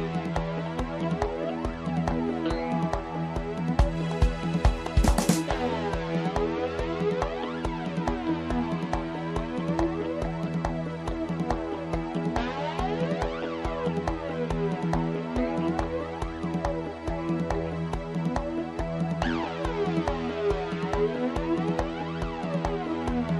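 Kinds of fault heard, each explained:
No audible faults in the audio.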